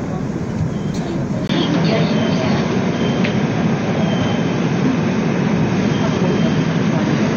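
After a 20 ms gap at 1.47 s, the sound loses everything above 6.5 kHz and gains faint hiss, likely from an input switched to a poorer device.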